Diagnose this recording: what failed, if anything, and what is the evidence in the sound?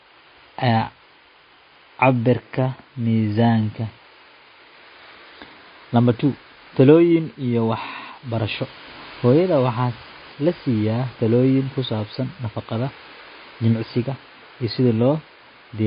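Throughout the speech, the sound is dull and watery, with nothing above 5 kHz, swirling artefacts, and chirpy s sounds. This is likely MP3 compression at the codec stage, consistent with a low bitrate near 24 kbps: the encoder drops the treble and switches weak frequency lines on and off between frames.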